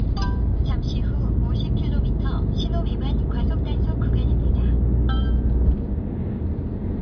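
A recording of sounds whose signal path shows no technical faults at any point.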